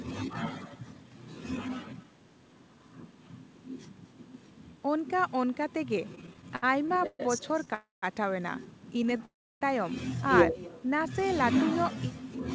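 From the start to the end, the speech carries an echo with no canceller. The far end's loudspeaker output returns through its microphone, so every phrase is followed about a fifth of a second later by a copy about 22 dB down, thinner than the original. On a spectrogram each speech burst has a faint, delayed twin, cut off at 8 kHz like the main signal because both pass through a band limit that fits a 64 kbps G.722 call path.

From 6.13 to 7.68 s come repeated stalls (stutter). Packets arrived late fifteen times, and each time the jitter buffer ran dry and the receiver stretched the last sound to fill the wait. In total 339 ms was filled, about 22 percent of that stretch, with the longest gap 128 ms. The speech drags and catches. The waveform shows short flat or smeared patches, and the spectrogram shows horizontally streaked harmonics at each gap.

At 7.74 s a call audio freeze begins, lasting until 8.04 s. 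The last sound is held briefly as a fading buzz, then drops to silence for about 180 ms, 280 ms in all, before the speech resumes where it stopped. The likely cause is packets held up in the network, emptying the jitter buffer. The spectrogram shows a smeared tail ending in a blank vertical band, and the waveform a flat stretch.

Between 9.03 and 9.21 s a second, shorter run of stutter appears: three gaps totalling 36 ms, none longer than 27 ms, about a fifth of that span concealed. On the spectrogram they show as very thin smeared slivers.

A second freeze runs from 9.25 to 9.63 s. After a brief held buzz, about 320 ms of silence follows, 359 ms altogether, then the speech continues intact. It looks like a wider blank band than the first.

From 10.80 to 11.21 s a jitter buffer slow-down adds 36 ms. Single pitch periods are repeated to rebuild the reserve, so the speech runs at about 93 percent speed with unchanged pitch and slightly drawn-out sounds. 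The waveform shows repeated identical cycles, and the spectrogram shows slightly stretched harmonics.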